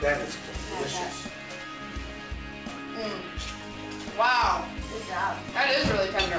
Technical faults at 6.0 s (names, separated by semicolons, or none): none